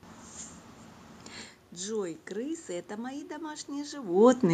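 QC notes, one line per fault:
No system faults are present in the clip. Background noise from the room sits under the speech, and the level shifts at around 1.5 s and again near 4 s as the talker moves relative to the microphone.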